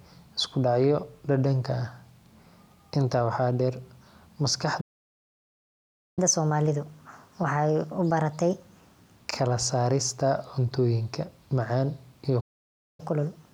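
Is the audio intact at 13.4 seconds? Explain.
No. From 13.00 s to the end at 13.53 s, catch-up at higher speed runs the speech at 1.25x after a stall, raising pitch by roughly four semitones.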